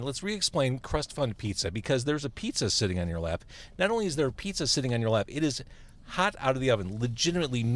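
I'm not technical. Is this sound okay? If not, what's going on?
Yes, nothing is wrong with this recording.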